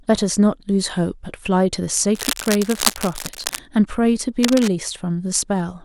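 A speech recording with two bursts of cable scratch noise, from 2.15 to 3.59 s and from 4.43 to 4.68 s, rasping only a little below the speech. On a spectrogram these show as dense, ragged broadband smears; the waveform gets jagged spikes. The likely cause is a worn cable or connector being moved.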